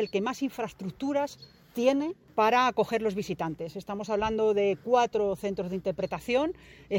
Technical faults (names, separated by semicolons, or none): none